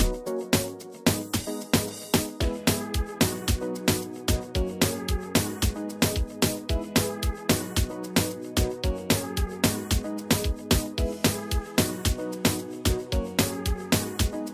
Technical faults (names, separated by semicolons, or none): none